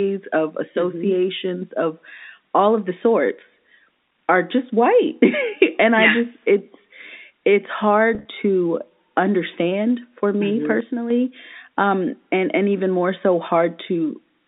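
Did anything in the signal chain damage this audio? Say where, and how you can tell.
Yes. At the network stage, packet loss with pitch repetition hits at 8.15 to 8.25 s. About 80 ms of audio went missing in short bursts scattered across roughly 100 ms, with no single gap longer than 30 ms. Each hole was bridged by repeating the last pitch period, so the sound briefly holds on a slightly buzzy, static tone. On a spectrogram the harmonics go flat and evenly spaced for those instants, and the waveform shows copied identical cycles.

From 10.80 to 11.10 s the level abruptly falls by about 6 dB for 300 ms and then snaps back. That step is what you get when one stereo channel drops out and the remaining channel is summed to mono, so the likely cause is a lost channel at the driver or buffer stage. The waveform envelope shows a clean rectangular dip with square edges. On the spectrogram the whole 200 Hz to 3.7 kHz telephone band darkens uniformly, with no change in spectral shape.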